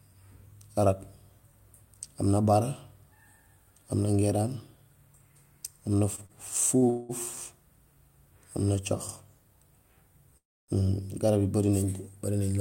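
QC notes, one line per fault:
6.15–6.85 s, short stall from a late packet, three times: at 6.15 s for 26 ms, 6.26 s for 33 ms, and 6.77 s for 47 ms. Each time the speech hangs on one sound and holds it a little too long, with a faint buzz. A packet arrived late and the jitter buffer ran dry. The receiver stretched the last sound to cover the wait. Then speech picks up where it left off, and nothing is lost.
6.90–7.12 s, call audio freeze. The sound stops moving and turns into a buzzy drone for about 0.19 s. Then speech resumes at the exact point it paused. The likely cause is packets held up in transit, which emptied the jitter buffer. The receiver kept repeating the last sound to fill the gap. Nothing is missing. A pause has been inserted.
10.37–10.71 s, call audio freeze. A brief held buzz fades into about 0.28 s of silence, so the total stall is roughly 0.31 s. Then speech continues from where it stopped. 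Once the stretched sound runs out, only silence fills the rest of the wait. No speech is dropped, but the delay grows by that amount.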